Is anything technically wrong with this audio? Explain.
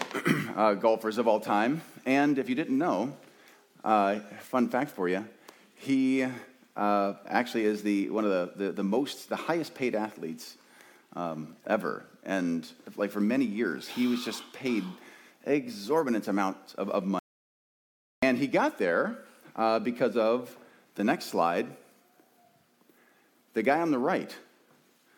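Yes. An audio dropout to silence runs from 17.19 to 18.23 s: the input was likely lost, through a disconnected device, failed link or mute, while recording continued writing zeros. The sound cuts off abruptly into total silence with no room tone for about 1.03 seconds, then resumes mid-flow.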